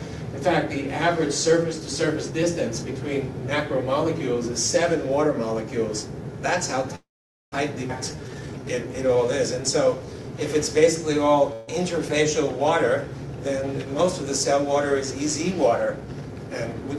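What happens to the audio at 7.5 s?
From 6.95 to 7.54 s there is a call audio freeze: the last sound stretches into a brief fading buzz, then 0.48 s of silence, and the audio resumes exactly where it stopped. Delayed packets likely drained the jitter buffer. Unlike a dropout, nothing is lost; everything simply arrives 0.57 s late.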